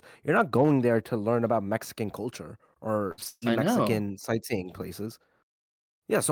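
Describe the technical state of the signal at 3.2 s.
Repeated packet loss (robotic sound) covers 3.2 s, running from 3.11 to 3.44 s. Audio data arrived missing or late in four separate gaps, the longest 143 ms. Each hole was patched by stretching the last received sound forward, and the next dropout came before the signal could recover. About three quarters of the span is concealment rather than real audio, so the speech turns choppy, with pieces absent.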